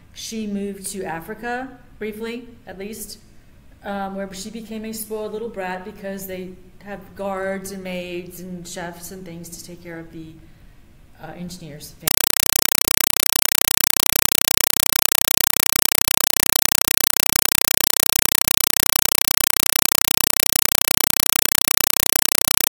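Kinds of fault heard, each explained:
Compressed stream played as audio: from 12.08 s to the end, an AC-3 stream, which fits a 192 kbps encode, is being treated as ordinary PCM samples instead of being decoded, so the sound is replaced by very loud, chattering static. Each coded frame comes out as a 4 ms blast of noise followed by silent padding, repeating 31.25 times a second. A waveform shows evenly spaced solid blocks separated by flat lines; a spectrogram shows broadband vertical stripes at that spacing.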